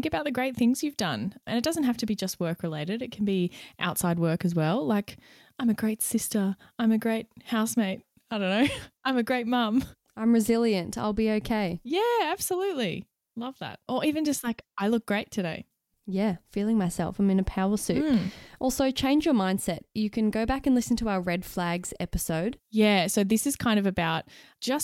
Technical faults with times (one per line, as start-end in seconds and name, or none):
none